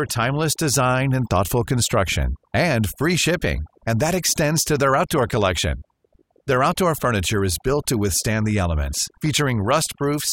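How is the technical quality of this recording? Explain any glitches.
The recording is marred by overdone noise removal running through the whole speech clip. The background in the pauses between phrases drops away, dotted with twinkling specks. This happens when a noise reduction process is set too aggressively: any frequency band close to its estimated noise level gets pulled far down or muted outright, so the softer parts of the voice are stripped away along with the noise, leaving isolated bands flickering in and out.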